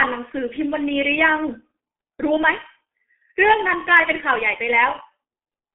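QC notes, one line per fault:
Throughout: G.723.1 codec. Nothing above 3.5 kHz and a narrow 200 to 3400 Hz telephone band leave the speech muffled. Heavy coding damage blurs consonants and adds hoarseness from slowly updated 30 ms frames, which fits a low rate near 6.3 kbit/s.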